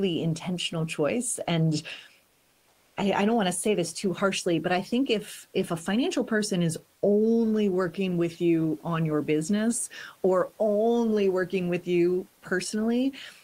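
From 2.27 to 2.97 s, just before "I I don't want", the room noise heard elsewhere in this speech clip gives way to comfort noise in place of the background for about 0.7 s. The pause most likely triggered discontinuous transmission, so the sender went quiet and the receiver filled the gap with generated noise. It sits at the same level, roughly 42 dB below the loudest passages, but sounds flat and featureless until speech resumes.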